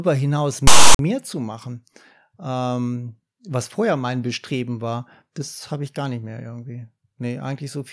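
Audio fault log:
0.67–0.99 s, file tags played as audio: a block of metadata, text followed by zero padding, was decoded as if it were sample data, just before "zu machen". The text bytes form a loud, harsh rasp pushed off to one side, because character codes are all positive values and sit away from the centre line. The padding then drops to dead silence. Both edges are abrupt, so the burst lands as hard-cut static within the speech.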